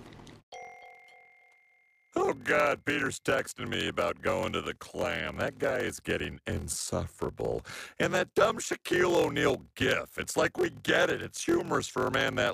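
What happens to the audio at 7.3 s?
A steady buzz at about 43 Hz, with the audio running at 0.86 times normal speed but unchanged timbre, continues through 7.3 s and the whole clip. This is a block size mismatch (padded): short blocks are zero-filled to fit a larger read, which fits a 1024-sample block.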